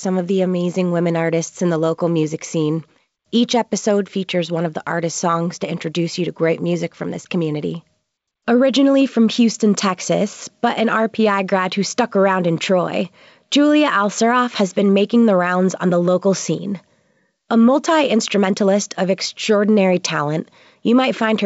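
No technical faults are audible.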